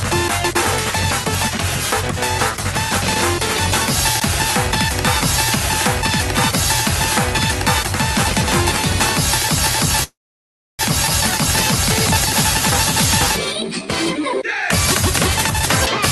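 At 4.20 s a block of digital silence cuts through the sound: about 16 ms of samples drop straight to silence and return with no fade. What sets it apart from a freeze is that nothing stands in for the missing audio. The gap is digital silence, abrupt on both sides.

From 10.03 to 10.82 s there is a call audio freeze, likely caused by packets stalling on the network until the jitter buffer ran dry. The receiver first stretches the last sound into a brief fading buzz, then goes silent for about 660 ms. When audio returns, it continues exactly where it stopped. Roughly 0.76 s of delay has been inserted with nothing lost, unlike a dropout that removes material.

At 11.07 s comes a skip ahead. Playback jumps forward across roughly half a second of audio, joined with only about 4 ms of fill, so there is hardly any audible gap. This is the opposite of the freeze. Nothing pauses, but the passage is abruptly discontinuous because material is missing. 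It also reclaims about half a second of the delay that the freeze had added.

Between 13.46 and 14.37 s a jitter buffer slow-down stretches the sound. The receiver repeats individual pitch periods and slivers of pauses to rebuild its reserve, adding about 70 ms over that stretch. The audio runs at roughly 93% speed with its pitch unchanged, giving drawn-out sounds. Unlike the freeze, there is no stall or silence, only a smooth, slightly sluggish lengthening. Throughout the clip, the Opus call path limits the high end to about 12 kHz.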